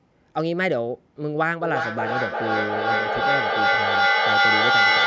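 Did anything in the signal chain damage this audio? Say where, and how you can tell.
Yes. From 1.61 s to the end the speech keeps coming back at a steady interval of roughly 0.4 s, each return thinner and more ringing, and the repeats build until they reach about 6 dB above the speech itself instead of fading. That is feedback echo between two devices on the call: one device plays the other's microphone signal into the room, that microphone captures it again, and neither echo canceller removes sound its own device did not play.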